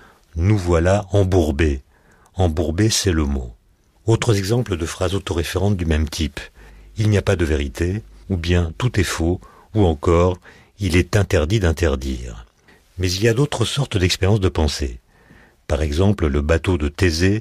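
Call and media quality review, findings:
Ground loop or nearby transformer coupling 50 Hz mains into the signal path. Mains hum, 6.57 to 9.46 s, between "autoréférentes du même type" and "ou encore il est". Steady low 50 Hz tone with some low harmonics under the speech, about 25 dB below it.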